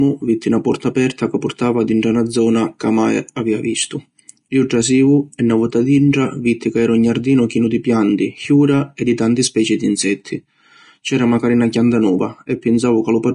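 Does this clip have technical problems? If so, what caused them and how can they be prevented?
Yes. Throughout the speech, the treble sounds grainy and hissy, with nothing above about 10.6 kHz, which points to low-rate Vorbis compression, likely around 35 kbps, where the codec coarsely quantises upper detail into noise. Encoding at a higher Vorbis quality setting would prevent it.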